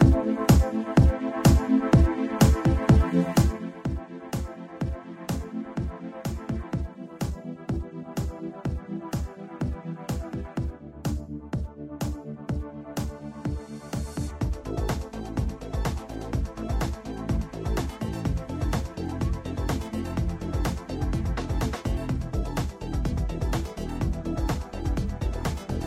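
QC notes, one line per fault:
3.24 to 3.87 s, zipper noise: the level drops by around 10 dB here, but in hard 1 dB jumps rather than a smooth glide, about twenty of them a second. Each jump is an instant change in gain with no ramp, so it puts a tiny click into the waveform. Strung together at that rate, the clicks turn into a fast ticking or zipping that sits on top of the sound for the length of the fade.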